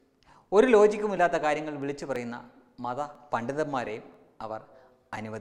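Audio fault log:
0.18 to 5.13 s, periodic USB or driver dropouts. Regular ticks recur every 0.99 s. Each time, around 10 ms of audio is skipped outright, so the waveform jumps and clicks. The steady spacing points to a background task stalling the bus or driver.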